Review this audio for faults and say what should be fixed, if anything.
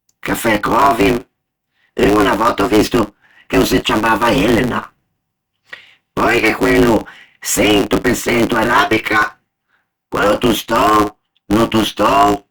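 There's a block size mismatch (truncated) running through the whole speech clip. Each block gets its tail chopped off before the next stage reads it, so you get a 109 Hz buzz at the block rate and everything plays 1.16 times fast at near-normal pitch, which fits 512-sample blocks being written. To prevent it, make sure both stages agree on one block size.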